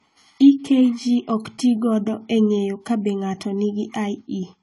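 AAC compression runs through the whole speech recording, with plainly audible damage. Nothing sounds above about 11.5 kHz, and the top end is dull and smeared. Sibilants carry a fizzy, warbling texture that fits a low bitrate of around 32 kbps in AAC-LC. The likely cause is an encoder short of bits: it lowers the cut-off and quantises the remaining frequency lines coarsely against its hearing model, leaving gaps in the spectrum.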